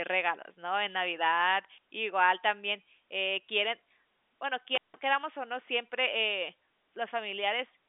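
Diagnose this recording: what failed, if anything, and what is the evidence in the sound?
At the network stage there's packet loss with pitch repetition: right at 3.89 s the speech briefly holds on a buzzy note for about 10 ms, which fits a single lost packet. The receiver just repeated the last pitch period to paper over the gap.

Then there's an intermittent contact in the analogue wiring, from 4.75 to 4.97 s. The speech cuts out with crackle at both edges and faint hiss in between, the line sitting open for about 160 ms, likely from a loose plug or cable, separate from the G.711 telephone path.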